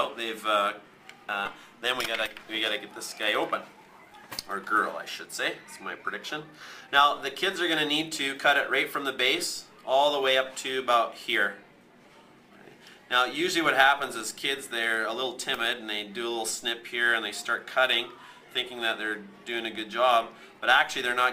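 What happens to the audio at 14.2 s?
Nothing goes wrong at 14.2 s; the audio runs on intact through that moment.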